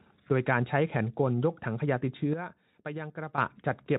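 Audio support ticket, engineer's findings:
Sudden gain jump at 2.33 s. Speech and noise floor drop together by about 11 dB, no fade. Level snaps back at 3.38 s. Likely a gain setting or bit shift applied without a ramp. Speex coding faint underneath.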